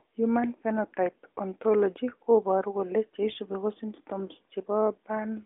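No faults can be heard anywhere in the speech.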